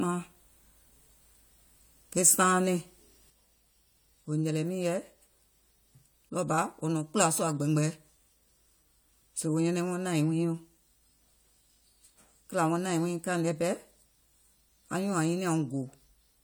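No technical faults are audible.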